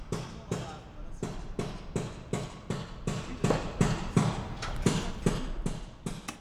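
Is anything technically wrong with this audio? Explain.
Yes, there is zipper noise. From 5.02 to 5.76 s the level drops by roughly 15 dB in unsmoothed 2 dB steps, about ten per second, and each jump leaves a small click, so a ticking rides on the sound. The waveform envelope shows a staircase, and the spectrogram shows faint vertical broadband lines at each step.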